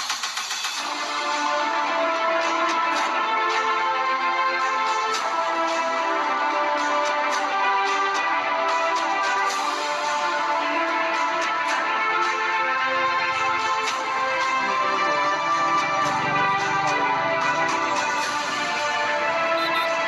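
Nothing stood out as a technical problem on listening to this clip.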